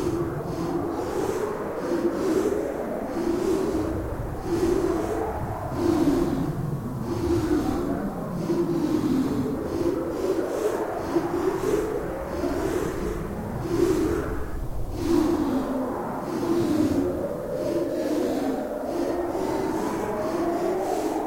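An everyday-sound recording carrying low bit depth with dither from start to finish: a constant, even hiss sits roughly 30 dB below the sound, which fits an 8-bit signal. Undithered truncation would leave gritty distortion that follows the sound; this noise stays steady and clean instead.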